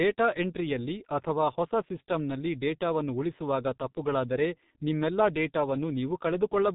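From start to finish the speech carries heavy G.723.1 codec damage. This early telephony coder models the voice in 30 ms frames and refreshes that model slowly, so consonants blur together and the voice turns muffled and hoarse; the thinness fits a rate of around 6 kbit/s. On a spectrogram, energy stops sharply at 4 kHz with nothing above, and the harmonics look smeared and blocky in time rather than finely traced.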